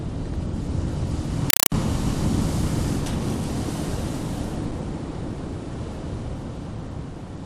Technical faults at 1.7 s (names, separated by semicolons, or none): compressed stream played as audio